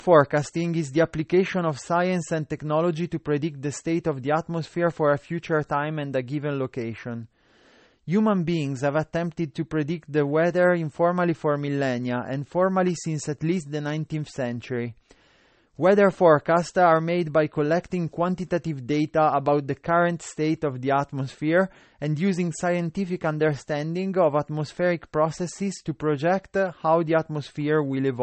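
Low-bitrate audio saved at a high bitrate runs through the entire speech clip. Nothing sounds above 8.4 kHz, and the dull, smeared quality fits a very low-bitrate MP3 that was likely re-encoded at a far higher bitrate, which cannot restore what the first encoding discarded.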